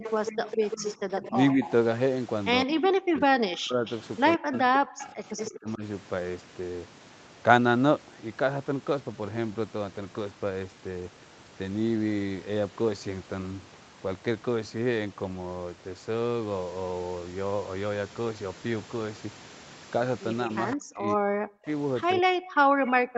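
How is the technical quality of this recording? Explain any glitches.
The recording has clear call-processing faults in three places: at the start, between about 2.7 and 5.8 s, and at the end. The audio itself stops at 8 kHz, which is normal for an Opus call path at this bandwidth.

Speech suppressed in double talk: from 0.0 to 1.6 s, 2.65 to 5.83 s and 20.76 to 23.17 s, the talker dips and breaks up. The first stretch loses about 10 dB for about half a second in total. The later ones drop by up to about 40 dB, and the middle stretch is gapped for about two seconds. The likely cause is an echo canceller that could not separate the talker from loudspeaker echo while both sides spoke, so it turned both down.

Echo leak: a copy of the sound arrives 152 ms late, at about 10 to 20 dB below the speech. It appears from 0.0 to 1.72 s, briefly at 3.86–3.93 s, from 4.53 to 5.47 s, and in a short scrap at 20.71–20.76 s. 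This is likely loudspeaker pickup that the echo canceller failed to remove.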